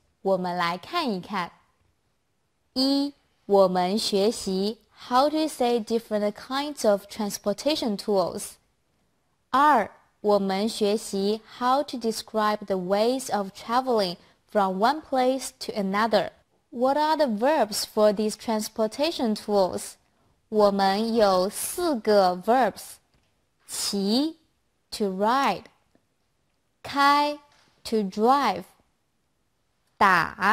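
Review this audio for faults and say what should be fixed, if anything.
Periodic clock jitter from 19.42 to 22.03 s: interference wobbles the converter clock at around 500 Hz, adding sidebands at that spacing around every component and giving higher frequencies a rough, metallic edge. To prevent it, isolate the converter's clock from interference with clean, well-filtered power and grounding.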